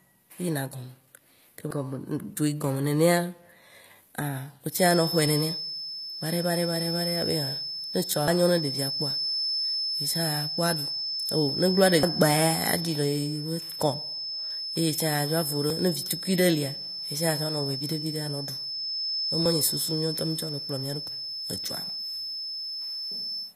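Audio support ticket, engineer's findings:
Spectrally replicated treble throughout, from HE-AAC compression, likely at a rate fitting a 24 kbps stream. Codec damage plainly audible: upper band synthesized from copied lower bands, so sibilants lose their true harmonic structure. Spectrogram: hard ceiling at 14.9 kHz, repetitive patterned energy in the treble above the coded band.

Feedback whistle from 4.68 s to end: steady 5.2 kHz tone about 5 dB under the speech, swelling and fading slowly. Probable component: speaker-to-mic loop near the edge of feedback, likely. Spectrogram: thin continuous horizontal line at 5.2 kHz.

Dropped buffer (overrun) at 8.28, 12.03, 14.51, 15.70, 19.46 and 21.08 s: speech jumps forward with no silence. Roughly 100 ms skipped at four points, roughly 300 ms at 12.03 and 21.08 s. Likely capture reading too late, hardware overwriting unread samples. Waveform: abrupt splice discontinuities, no gaps.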